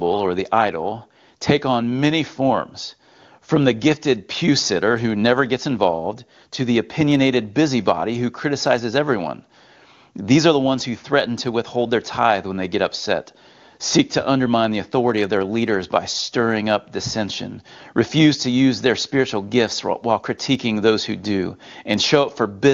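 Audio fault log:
The speech carries the band-limited character of AMR wideband (HD Voice) coding, with detail up to about 6.4 kHz and a noise-filled top band reaching 7 kHz, and its clarity fits the codec's highest 23.85 kbit/s mode with no faults to log.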